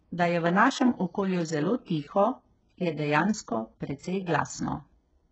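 Speech clip with heavy HE-AAC compression throughout, likely from a very low bitrate around 8 kbps: treble is rebuilt from copied lower bands, sounding gritty and metallic, with nothing above about 7.9 kHz.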